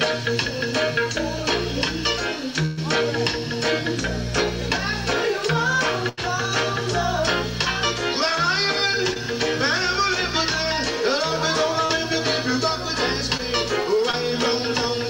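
At 2.65–2.79 s and 6.09–6.19 s the sound freezes into a held, fading tail before jumping ahead: burst packet loss, with roughly 120 ms and 80 ms lost and concealed. Brief smears or wobbles at 9.13–9.17 s, 11.85–11.91 s, 13.37–13.41 s and 14.11–14.15 s are short concealed packet loss, where 20 to 40 ms gaps were patched by extending the preceding sound.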